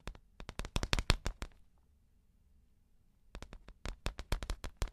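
No technical faults can be heard at any point in the audio.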